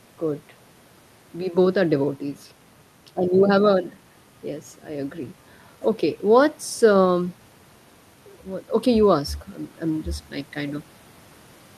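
No technical faults can be heard anywhere in this speech recording.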